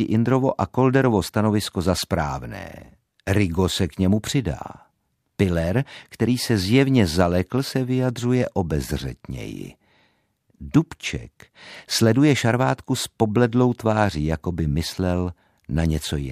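Listening closely, nothing in the speech stood out as a technical fault at any point.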